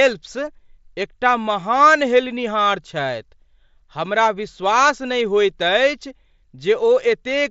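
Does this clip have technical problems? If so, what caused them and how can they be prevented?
Yes. At 2.25 s there is concealed Bluetooth headset packet loss. About 7.5 ms of audio went missing between headset and phone, which fits one dropped frame. The receiver filled the gap by repeating a well-matched stretch of the preceding waveform. The patch is brief and nearly hidden. Keeping the headset close to the phone, with a clear line between them and away from crowded 2.4 GHz Wi-Fi, prevents such drops.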